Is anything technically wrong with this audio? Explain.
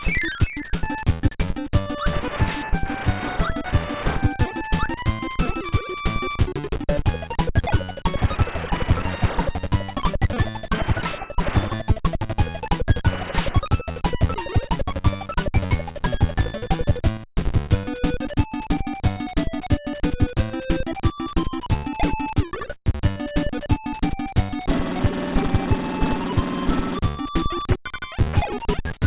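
No, no technical faults detected.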